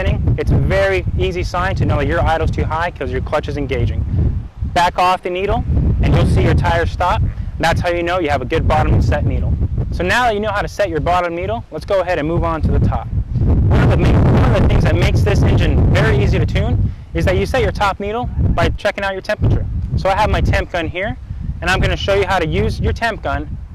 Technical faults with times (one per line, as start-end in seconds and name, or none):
none